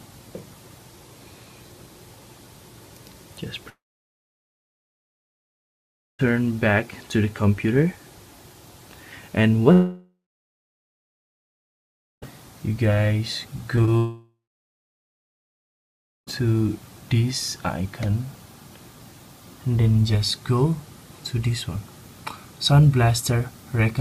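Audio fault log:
3.69–6.21 s, 9.73–12.24 s and 13.97–16.29 s, long network dropout: the sound briefly carries on as a fading continuation, then drops to silence for about 2.4, 2.1 and 1.9 s respectively before resuming further on. The likely cause is that no packets arrived for 2.5, 2.5 and 2.3 s. The receiver stretched the last sound until it died away, so the lost stretches are simply absent.
13.76–13.79 s and 13.85–13.89 s, short concealed packet loss: two brief smears or wobbles just before the third dropout. In each, 20 ms of audio missed the decoder, and the receiver bridged the hole by extending the preceding sound before blending back into the real signal.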